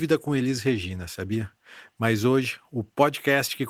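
Listening through this speech recording, nothing stood out as a technical problem at any point.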